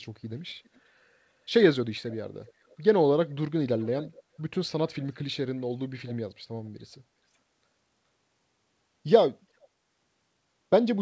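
Faint copies of the speech return about 0.4 s late at 0.64, 2.08, 3.29, 6.05 and 9.61 s, likely echo leak. These are distinct repeats, unlike reverb's smeared tail.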